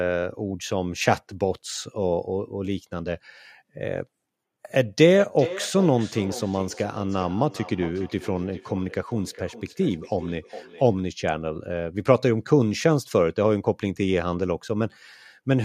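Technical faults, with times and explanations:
5.06–10.96 s, feedback echo between two devices: each phrase comes back roughly every 400 ms, thinner and ringier, peaking about 14 dB under the speech. A second device in the room replays the call into the mic, and its echo canceller can't see it.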